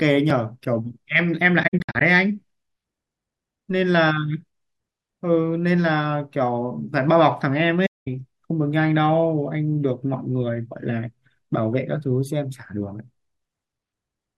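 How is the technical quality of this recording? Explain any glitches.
There are a few glitches worth flagging: one tiny dropout near the start and two patches of lost audio further in.

At 0.30 s there's a block of digital silence, roughly 2.4 ms long. The output buffer most likely wasn't filled in time, so zeros went out instead. It cuts hard to nothing and straight back, so you hear it as a quick tick.

The other two are AAC frame loss with muting. Between 1.62 and 2.02 s about 235 ms goes missing in scattered bits, the longest stretch around 70 ms. From 7.85 to 8.08 s about 213 ms goes missing. The decoder zeroed the lost frames, and the overlapping windows fade in and out, so these sound like soft-edged holes.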